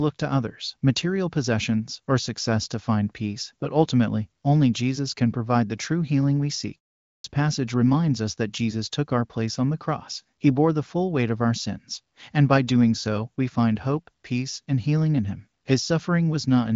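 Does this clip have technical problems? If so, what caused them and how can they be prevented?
Yes. At 7.11 s, after "true healing we seek", the sound bursts in missing its first 0.13 s: a clipped start after a pause, the output device waking late after 0.39 s of silence. Keeping the output stream running through pauses, or disabling the device's power-saving sleep, prevents this.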